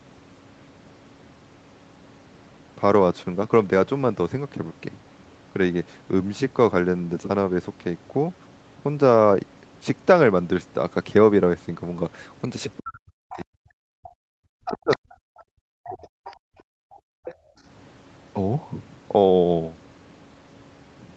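From 12.43 to 13.45 s a faint second voice runs under the talker, about 20 dB below the speech. This is the other side's voice leaking through, likely because the loudspeaker echo was not fully removed from the microphone. Unlike gating, it adds sound rather than taking it away: a separate voice sitting under the main one.

Starting at 12.8 s and lasting until 15.04 s, the talker's own speech sinks and breaks up in pieces, falling by as much as about 40 dB over roughly one and a half seconds in total. This is speech suppressed in double talk, likely because the canceller could not tell the near talker from the echo and turned both down. More leakage follows from 14.91 to 15.43 s, here about 15 dB below the speech.

From 15.32 to 15.54 s the room background drops out, about 38 dB down for around 150 ms. This is background gated by the echo canceller, which clamps the microphone while the loudspeaker plays. 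What sets it apart from double-talk suppression is that the ambience vanishes, not the talker's words.

Speech is suppressed again from 15.82 to 16.08 s, by about 30 dB. Short scraps of leaked voice appear at 16.24 to 16.36 s and at 17.3 s. From 16.36 to 17.64 s the background is gated again, down about 39 dB for around a second.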